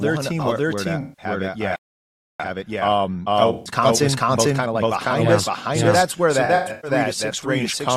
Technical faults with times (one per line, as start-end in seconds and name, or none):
0.00-7.96 doubled audio track
1.01-1.25 AAC frame loss with concealment
1.76-2.40 playback stall
2.40-4.94 time-compressed catch-up
3.53-3.71 AAC frame loss with concealment
6.45-6.91 AAC frame loss with concealment